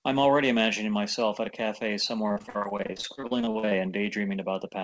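Repeated packet loss (robotic sound) breaks up this speech recording from 2.28 to 3.73 s. Across that stretch the stream suffers 24 short dropouts, the longest about 54 ms. Each one is patched by stretching out the preceding sound, so roughly 41% of the span is concealment rather than real signal. The result is choppy sound with fragments missing. The audio has also passed through a call codec and jitter buffer. Nothing is present above 8 kHz, which fits G.722 at 64 kbps.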